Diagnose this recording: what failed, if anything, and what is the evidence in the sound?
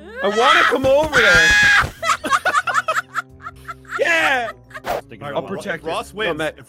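Low bit depth with dither at sample-format conversion. From 0.54 to 2.04 s, a steady, even hiss sits about 30 dB below the signal. 8-bit rounding with dither produced it.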